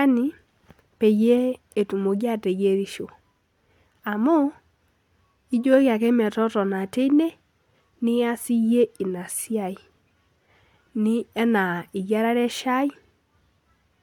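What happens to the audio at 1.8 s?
Nothing goes wrong at 1.8 s; the speech carries on intact through that moment.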